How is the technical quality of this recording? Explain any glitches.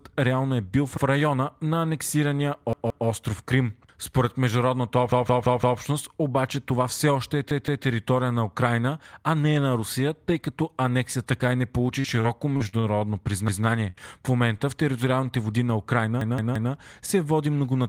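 The recording is marred by repeated playback stalls and two stretches of network packet loss.

Repeated buffer: five times the playback device ran out of fresh audio and replayed its last buffer. Each repeat lasts 170.67 ms, which fits an 8192-sample buffer at 48 kHz. Little or no speech is lost; time is inserted instead. After "в района на анексирания", 2.73 to 3.07 s, the piece plays twice more. At 5.12 to 5.80 s it repeats four extra times, just before "обаче това все още". It repeats twice more at 7.51 to 7.85 s and once more at 13.48 to 13.65 s. Three extra plays come at 16.21 to 16.73 s, ahead of "се води многонационално военно". Each is heard as a stutter, the same fragment looping with a hard seam at every join.

Repeated packet loss (robotic sound): from 12.00 to 13.04 s, packets failed to arrive eight times in quick succession. The decoder patched each hole by extending the preceding sound, with the longest gap 41 ms. 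About a fifth of that second is synthetic fill, about 160 ms of real audio gone. The speech turns choppy, with bits dropping out.

Short concealed packet loss: at 13.90 to 13.96 s, about 40 ms of audio never reached the decoder. It was bridged with 33 ms of extrapolated sound before rejoining the real signal, audible as a brief smear or wobble.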